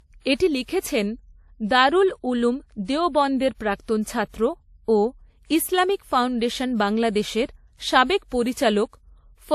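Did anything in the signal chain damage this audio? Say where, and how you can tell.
Yes, at the codec stage, and it runs through the whole speech clip. There's nothing above 14 kHz, and two different flavours of lossy smear sit on top of each other rather than one consistent artefact set. That layering points to transcoding between lossy codecs, likely something like an AAC-LC encode later re-encoded to WMA 1. The second encoder wastes bits reproducing the first one's damage, adds its own, and the lower cut-off carries through.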